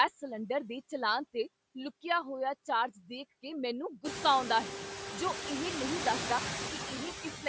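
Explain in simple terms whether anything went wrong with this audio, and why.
Two things went wrong, both caused by the noise suppressor on the call.

Throughout the clip there are noise suppressor artifacts. This filter tries to strip out steady background noise by turning down any part of the sound it judges to be noise. It does that in quick slices, so the leftover noise doesn't stay even. It dips in the pauses and swells back under the speech. After about 4 seconds, the room noise grows louder and the filter has more to fight.

Right at the end, from 7.23 to 7.46 seconds, there is speech cut by the noise suppressor. Here the filter mistook part of the speaker's own sound for background noise and turned it down along with the background. For roughly a tenth of a second in that stretch, the closing sounds come out faint or swallowed, as if the last bit was pulled away before it finished.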